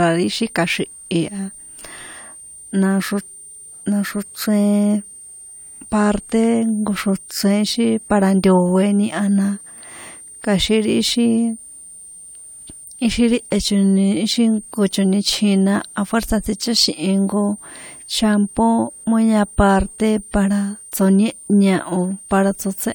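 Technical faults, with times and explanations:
Throughout, switching supply whistle: there's a thin high whistle sitting under the speech the whole way, wandering between about 8.7 and 9.0 kHz, roughly 20 dB below the speech. That's a switch-mode power supply dropping into a burst mode slow enough to land in the audible range, so its switching rate leaks into the audio, and the pitch drifts as the load on the supply shifts.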